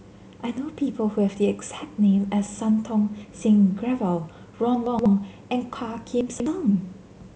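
Chunks out of order twice: at 4.86 to 5.06 s a 64 ms block of the speech plays two chunks late, and at 6.21 to 6.46 s one plays three chunks late. Each shuffle leaves three hard joins, heard as a brief jumbled stutter.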